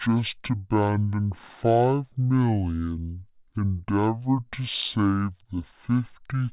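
From start to finish the speech plays at half speed and an octave low, a wrong sample rate fault. Samples captured at 16 kHz are being clocked out at 8 kHz without conversion, so every sound stretches to twice its length and drops 12 semitones, giving a slow, deep, dragging delivery.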